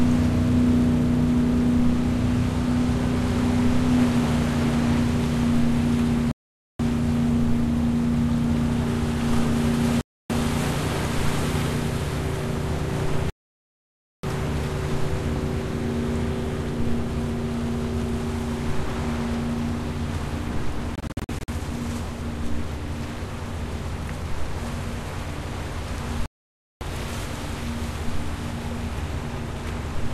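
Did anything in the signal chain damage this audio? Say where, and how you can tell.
Yes, a digital broadcast dropout at the reception stage. The receiver muted on failed frames at 6.31–6.80, 10.01–10.30, 13.30–14.24, 20.95–21.49 (scattered short holes) and 26.26–26.82 s. Waveform and spectrogram show flat, full-band silent gaps, and the sound resumes later with the missing material gone.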